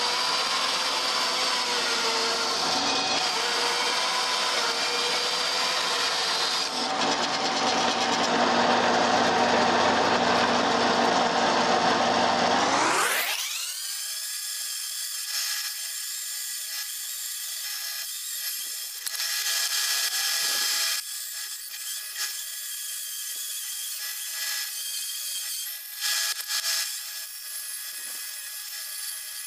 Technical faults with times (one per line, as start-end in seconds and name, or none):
none